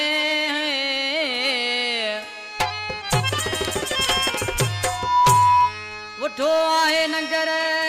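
A single tone near 983 Hz swells over about a third of a second into a piercing squeal from 4.85 to 5.75 s, peaking roughly 10 dB above the surrounding audio. This is loudspeaker feedback squeal: a microphone re-amplified its own loudspeaker until that frequency ran away.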